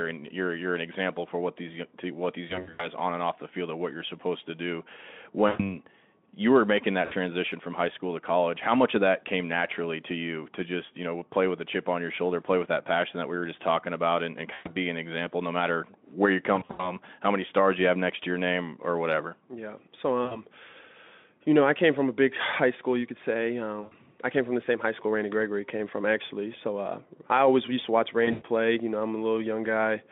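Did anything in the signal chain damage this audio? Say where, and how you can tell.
Yes, at the network stage. There's VoIP packet loss concealed by the speech codec at 2.47–2.88, 5.47–5.61, 7.05–7.14, 14.53–14.75, 16.56–16.95, 20.25–20.40, 23.81–23.94 and 28.25–28.44 s. In each gap the decoder keeps replaying its last pitch and filter with falling gain, so the speech smears into a fading buzz or coloured noise. The worst gaps, at 2.47 and 16.56 s, lose around 160 to 180 ms spread over 240 to 320 ms. The narrowband Speex coding underneath adds little damage of its own.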